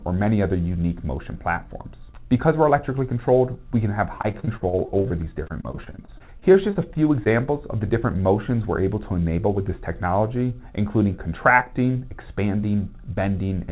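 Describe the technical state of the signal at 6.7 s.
Repeated packet loss (robotic sound) covers 6.7 s, within a stretch from 4.18 to 7.28 s. Packets kept dropping, and each hole, up to 41 ms, was patched by extending the preceding sound. About a fifth of the stretch is concealed, so the 4 kHz-limited call audio turns choppy and robotic.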